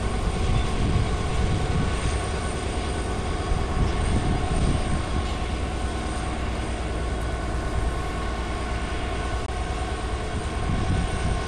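At 9.46 to 9.48 s there is a CD skip. The laser lost its place on the disc's spiral track, so the player went silent for roughly 20 ms and then resumed from a different point, heard as a small tick followed by an abrupt discontinuity in the sound. On a waveform this shows as a short flat gap with hard edges. A spectrogram shows a thin vertical break, with the material on either side not lining up.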